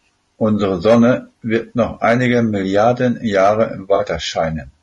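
Throughout, the speech sounds rough and grainy, with noise between harmonics and a dulled top band, likely low-delay AAC compression at a rate around 32 kbps. From 3.95 to 4.01 s, a brief smeared, noisy patch marks AAC frame loss with concealment: about 40 ms of audio went missing and the decoder filled it from the preceding spectrum.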